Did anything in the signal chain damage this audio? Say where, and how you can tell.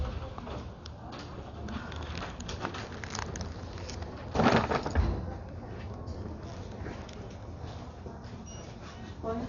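Yes: the codec stage, likely Dolby Digital compression starved of bits. Throughout, the sound is dull and fluttery. A spectrogram shows a hard ceiling at 7 kHz and speckled noise-filled bands.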